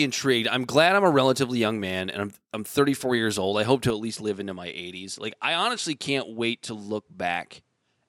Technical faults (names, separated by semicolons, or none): input switched to a poorer device